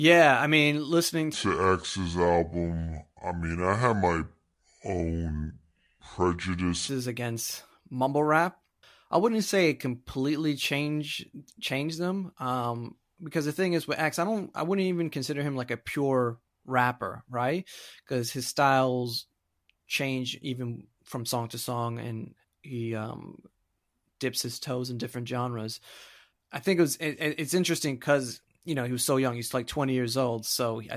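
From 1.33 s to 6.89 s, the speech plays with a wrong sample rate. It runs at about two thirds of normal speed, and its pitch drops by about 7 semitones. Both change together because the samples are read out slower than they were captured, with no conversion. The 2:3 ratio fits audio recorded at 48 kHz being played back at 32 kHz. The voice sounds deep, heavy and dragged out.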